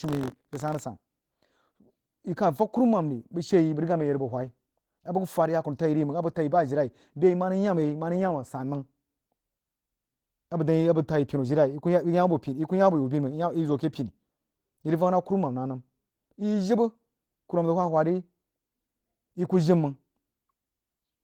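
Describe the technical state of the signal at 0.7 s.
At 0.7 s the signal carries buffer tearing, which runs from the start to 0.8 s. Writer and reader positions in the ring buffer have crossed, so a small slice of each period, a round 40 ms stale, is spliced in with hard edges. The result is a 46.9 Hz robotic buzz, which fits a 1024-sample buffer, present only while sound is playing.

Opus voice compression is also audible here, as it is across the whole clip. The codec runs in hybrid mode, with linear-prediction coding below 8 kHz and a transform layer above, over the full band in 20 ms frames. Coarse excitation coding leaves the speech plainly muffled, hoarse and slightly robotic, consistent with a rate around 16 kbps.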